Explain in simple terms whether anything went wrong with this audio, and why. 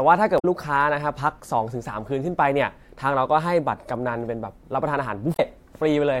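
Two short glitches, at 0.35 to 0.45 s and again at 5.32 to 5.40 s, come from damaged data in a compressed stream. Bits of the compressed speech file got scrambled, so the decoder briefly lost its place and spat out a quick glitch while hunting for clean data.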